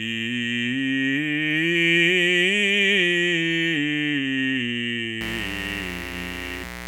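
From 5.21 s to the end of the music, a mains buzz appears. Something in the chain, such as a dimmer, rectifier or unshielded lead, is admitting sharp switching spikes from a 60 Hz supply, two per cycle, so the interference carries a dense stack of 60 Hz harmonics reaching well into the kilohertz range. It comes through as a steady, raspy buzz sitting not far below the music, coarse rather than a pure hum.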